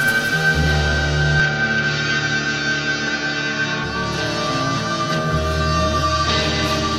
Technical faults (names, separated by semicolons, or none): input switched to a poorer device